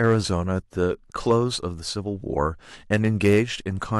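Crackle breaks in on loud peaks of the speech at 0.03–0.16 s, briefly at 1.30–1.36 s, and harsher at 2.93–3.39 s. This is hard clipping: peaks overdrive a stage by about 2, 3 and 5 dB, are cut flat, and add high harmonics.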